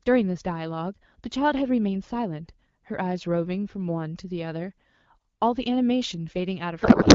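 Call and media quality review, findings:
Codec payload misread, 6.81 s to clip end: speech replaced by garbled warble barely tracking it. Points to octet-aligned AMR parsed as bandwidth-efficient; frames still decode, so no gaps or concealment repeats.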